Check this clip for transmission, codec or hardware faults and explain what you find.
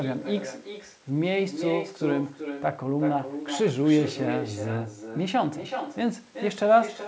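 One fault runs through the whole clip: echo with no canceller. Nothing removes the far end's loudspeaker pickup, so every phrase of the speech returns roughly 0.4 s later, about 8 dB quieter, as a thinner shadow trailing each utterance. The band-limit at 8 kHz comes from the call path and isn't a fault.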